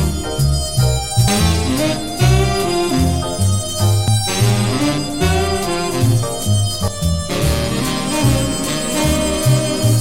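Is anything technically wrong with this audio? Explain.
Yes. The audio jumps abruptly forward at 1.28 s, 4.08 s and 6.88 s. At each point a short stretch, roughly a fifth of a second, disappears, and the sound on either side is butted together with no gap. The evenly spaced skips point to audio missing between chunks. The likely cause is a recorder working in 3-second blocks that drops material each time it closes one block and starts the next.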